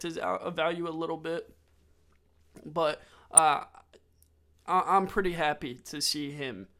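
At 3.37 s the speech carries a brief patch of DAB burbling: a few watery blips of noise sitting inside narrow frequency bands, not a gap or broadband click. Weak reception let bit errors slip past error correction into the MP2 data, at a low rate, likely around a tenth of a percent.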